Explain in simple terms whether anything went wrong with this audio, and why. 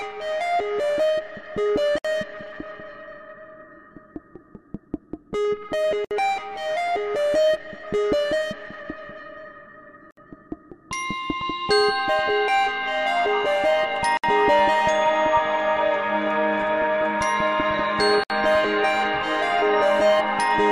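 The sound cuts out briefly five times: at 1.98, 6.05, 10.11, 14.17 and 18.24 seconds. Each dropout lasts about 63 milliseconds. They come every 4 seconds. This is a gap at a join of encoded pieces. The audio was compressed in separate chunks and then stuck together untrimmed. Each chunk kept a short silent lead-in and padded ending, so a tiny hole opens at every seam. The sound then resumes exactly where it left off.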